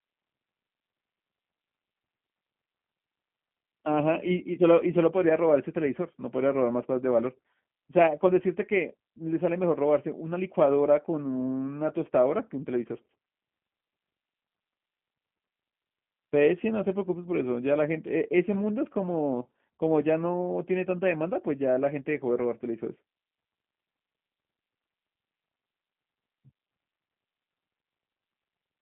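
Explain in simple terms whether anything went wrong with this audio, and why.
The speech passed through a G.729 phone codec from start to finish, which rebuilds it from a simplified model, so it sounds thin, gritty and slightly robotic.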